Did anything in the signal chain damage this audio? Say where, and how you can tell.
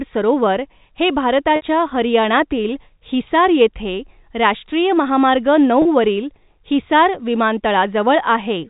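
Yes. Network packet loss with pitch repetition at 1.56–1.62 s, after "सरोवर हे", and 5.82–5.85 s, before "वरील हिसार". Each gap is a brief buzzy hold of one repeated pitch period.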